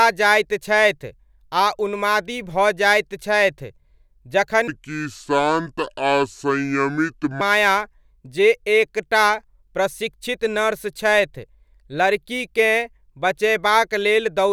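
From 4.68 s to 7.41 s the speech drops into a section at the wrong speed, running at 0.673 times its proper rate, so it sounds drawn out and roughly seven semitones deeper before snapping back to normal. This likely comes from that stretch being played against the wrong clock. Because pitch and pace sink together, it differs from a pure pitch shift, which keeps the timing intact, or a time-stretch, which slows delivery without lowering the voice.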